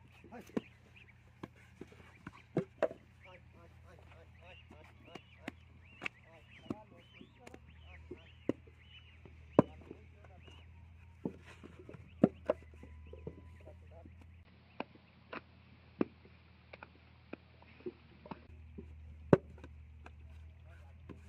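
At 14.43 s the sound drops out for about 20 ms. It then returns narrower and duller, with nothing above 5.5 kHz. A new background noise sits roughly 30 dB below the signal. The loudness barely changes. This lasts until 18.49 s, when the full band returns. The likely cause is the input switched to a poorer device, such as another microphone or a headset's call profile, with a narrower band and its own noise.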